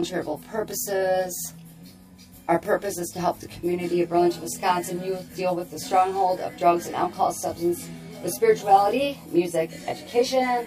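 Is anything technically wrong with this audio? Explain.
Yes. Channel delay causes comb filtering throughout. One channel lags by roughly 20 ms, so mono summing cancels evenly spaced frequencies from around 20 Hz, sounding rough or slightly doubled.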